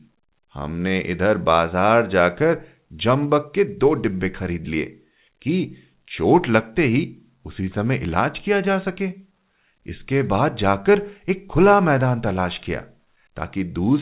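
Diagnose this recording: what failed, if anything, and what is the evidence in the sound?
Clock drift between sender and receiver, at the jitter buffer stage. The sender's clock runs about 4% slow, so the buffer keeps draining throughout.

Repeated timing corrections run from 0.01 to 13.86 s. The receiver repeats short pieces, adding under a second overall. Tempo drags to 96%, with uneven hiccups.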